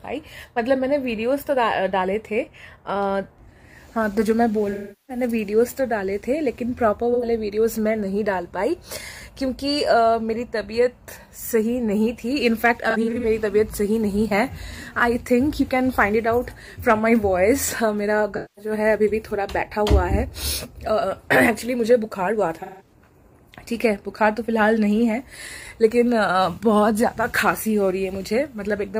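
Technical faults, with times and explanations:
4.71–5.24 s, AAC frame loss with concealment: about 384 ms of audio lost; the decoder rebuilds it from the last good spectrum, so a smeared, noisy patch replaces the sound.
7.13–7.25 s, AAC frame loss with concealment: a brief 85 ms gap patched the same way, heard as a short phasey blur.
12.90–13.25 s, AAC frame loss with concealment: 171 ms lost in pieces over 341 ms, runs of roughly 40 ms, giving a flickering, grainy stretch.
18.36–18.72 s, AAC frame loss with concealment: 213 ms concealed, smeared texture.
22.62–22.93 s, AAC frame loss with concealment: 171 ms concealed, similar noisy smear.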